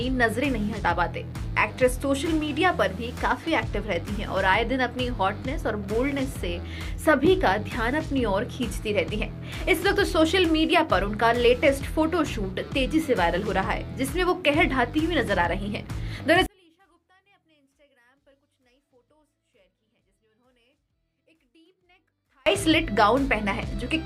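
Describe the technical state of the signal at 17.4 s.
At 17.4 s you're in the middle of a stretch, from 16.46 to 22.46 s, where one channel inverted is the likely cause: summed to mono, everything shared between left and right cancels, so the sound drops by about 41 dB to a faint residue.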